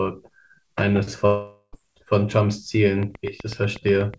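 From 1.26 to 1.75 s the speech breaks off: the last sound is stretched into a fading buzz, then a brief near-silence of about 70 ms, and the speech resumes with roughly half a second gone. This is likely a long network dropout, with the receiver filling the gap instead of playing lost audio.

From 3.03 s to the end, a steady ticking of evenly spaced, similar clicks runs at about 8 per second, clearly louder than the speech and audible between syllables. This train of clicks likely comes from interference or a faulty connection, on top of the call path's G.722 band limit at 8 kHz.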